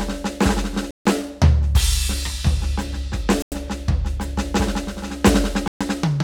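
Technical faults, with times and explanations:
0.91–1.06 s, 3.42–3.52 s and 5.68–5.81 s: Bluetooth stall. The music drops to silence three times, for about 150 ms, 95 ms and 130 ms. Each time it resumes abruptly, with no fade in or out. The likely cause is radio interference holding back packets on the wireless link. The headphones' buffer then runs empty. Playback halts until the resent data arrives, so the music stops dead and restarts.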